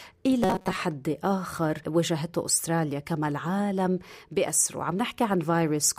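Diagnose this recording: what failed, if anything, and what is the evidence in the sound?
Robotic sound from repeated short buffers, 0.44 to 0.77 s: a rigid 188 Hz buzz, likely a starved buffer looping about 5 ms chunks. Unlike codec warble, its pitch stays fixed.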